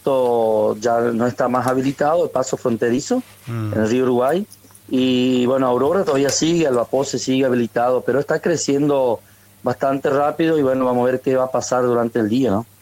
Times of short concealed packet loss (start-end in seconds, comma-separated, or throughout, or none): 10.76-10.82